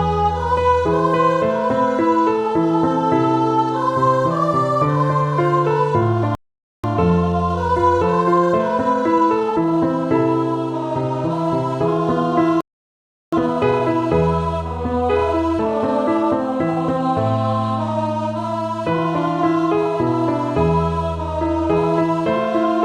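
At 6.35 s the sound just cuts out for about half a second (0.49 s), then again at 12.61 s for roughly 0.72 s. That's a playback stall, most likely the player running dry or its thread getting blocked, so the output drops to silence mid-flow until it recovers.

Right after each gap you get time-compressed catch-up. From 6.84 to 9.84 s it runs at 1.1x, and from 13.33 to 16.33 s at 1.15x. The player is trimming its backlog by snipping out small pieces and cross-fading across them, so things feel hurried while the pitch stays normal.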